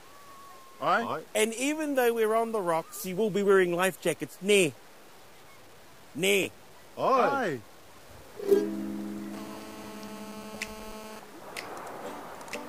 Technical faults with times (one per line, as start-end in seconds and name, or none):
0.00-12.68 low bit depth without dither
4.98-5.02 chunks out of order
6.43-6.45 chunks out of order
9.33-11.19 GSM phone buzz